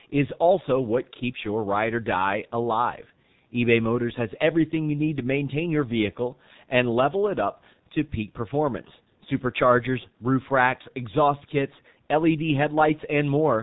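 Throughout the speech, the G.723.1 codec's heavy damage is audible: the sound is muffled above 4 kHz and hoarse, with smeared consonants, consistent with roughly 6.3 kbit/s coding in 30 ms frames.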